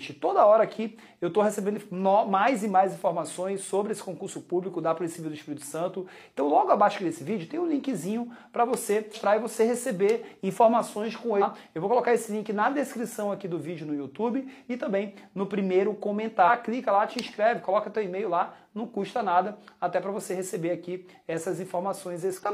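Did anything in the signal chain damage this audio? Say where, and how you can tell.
Yes. Four brief glitches, each roughly 50 to 60 ms, break through the sound at 9.11 s, 11.38 s, 16.44 s and 22.39 s. That points to damaged data in a compressed stream at the codec or storage stage: corrupted bytes made the decoder misread those frames, lose sync and skip forward to the next valid frame header, leaving a brief disturbance.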